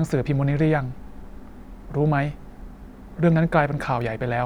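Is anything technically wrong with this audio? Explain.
No, nothing stood out as technically wrong when listening to this speech recording.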